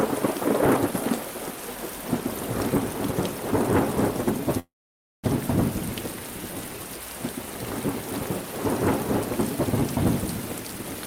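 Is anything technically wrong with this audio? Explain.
Yes, there are two problems. From 4.59 to 5.25 s there's a call audio freeze: the sound stalls and the receiver stretches its last bit into a short fading buzz or hiss, which then drops to near silence for roughly half a second before things pick up again exactly where they left off. Most likely packets got held up in transit and the jitter buffer ran dry, so about 0.64 s of filler was inserted and the rest of the audio now runs that much later, but nothing appears to be lost.

Then from 10.42 s to the end there's a jitter buffer speed-up. The audio suddenly plays at about 123% speed while keeping its pitch, so it sounds rushed rather than chipmunky. That's the receiver trimming tiny pitch-period-sized slices, one after another, to drain extra buffered delay, about 150 ms' worth in total over those last 0.64 s.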